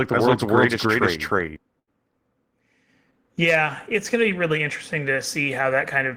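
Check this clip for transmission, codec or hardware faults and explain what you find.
Two faults are present: a doubled audio track at the start and a short burst of packet loss just after it.

From the very start until 1.56 s, a doubled audio track runs, most likely because a second, slower capture path or an out-of-step edit mixed the same speech in twice. The copy trails the original by roughly 300 ms at about the same level, so every syllable is followed by a dry, full-band repeat with no room tail. The echo stops abruptly at 1.56 s.

From 1.79 to 1.89 s there is a burst of packet loss. Several consecutive packets never arrived in time, so the receiver stretched the last received sound over about 75 ms and faded it down. Depending on the sound at the break, that comes out as a held buzz or a fading hiss. The speech then resumes with about 80 ms of the original missing, leaving an audible skip.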